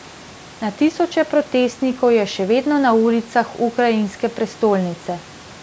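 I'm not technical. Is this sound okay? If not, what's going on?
Yes, this speech sounds fine, with nothing wrong.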